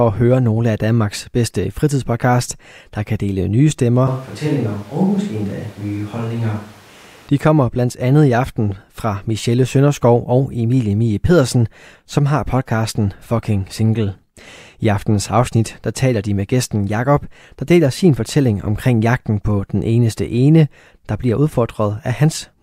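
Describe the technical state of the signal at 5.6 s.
At 5.6 s the recording has most likely lost its close microphone and fallen back to a distant one, a switch to a distant microphone lasting from 4.08 s, just after "kan dele nye stemmer", to 7.28 s. The speech turns suddenly roomy and hollow, with thinner bass, and drops by roughly 5 dB. Background noise rises to around 25 dB below the speech. At 7.28 s the close, fuller sound returns just as abruptly.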